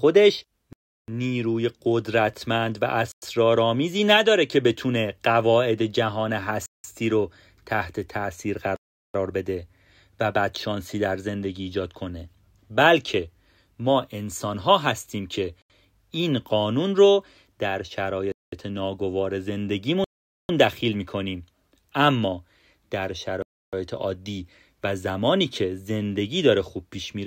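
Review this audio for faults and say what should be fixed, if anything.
The speech drops to dead silence eight times, likely Bluetooth stalls: 0.73, 3.12, 6.66, 8.76, 15.62, 18.32, 20.04 and 23.42 s, each gap 0.08 to 0.45 s long. The headphone buffer runs dry while interference holds back packets, then speech resumes. On the waveform and spectrogram these appear as flat, empty blanks with abrupt edges. Keep the phone close to the headphones and away from 2.4 GHz interference.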